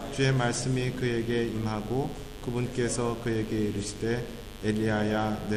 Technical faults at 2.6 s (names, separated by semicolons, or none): mains buzz